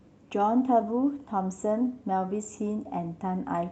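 No faults can be heard in this speech, and the call path's top end stops near 8 kHz, as a call codec at that bandwidth setting would.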